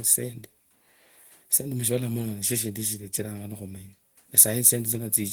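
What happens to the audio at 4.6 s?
Nothing goes wrong at 4.6 s; the speech carries on intact through that moment, with no dropout, click or distortion.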